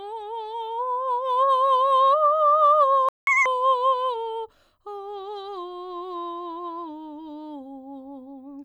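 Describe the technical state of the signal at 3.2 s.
At 3.2 s the music is in a playback stall, silent from 3.09 to 3.27 s, about 185 ms. The player most likely ran dry of data or was blocked. A waveform shows a flat gap, and a spectrogram shows an empty vertical band across every frequency.

Right after, from 3.27 to 3.46 s, comes catch-up at higher speed. The backlog plays at double speed to win back the lost time, so the music rushes and jumps up by nearly an octave. A spectrogram shows harmonics shifted upward and compressed in time before they drop back.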